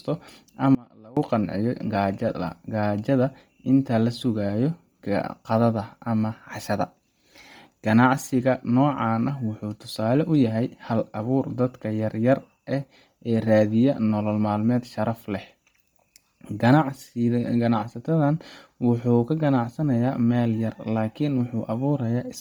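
Speech, and the whole thing has that breathy, grainy top end you get from heavy transform coding. It sounds like Bluetooth LC3 compression is the likely cause, with damage this heavy pointing to a low rate around 32 kbps and 10 ms frames. At that rate the encoder throws away much of the upper spectrum and patches it with shaped noise, so the sibilance and air sound synthetic rather than clean. Early on there's an audio dropout to a faint residue: from 0.75 s to 1.17 s, about 418 ms, the speech abruptly collapses to a faint leak sitting roughly 25 dB below normal level, then snaps back. The hard edges at both ends mean it isn't a natural pause or fade. The signal was likely lost while the path downstream stayed live.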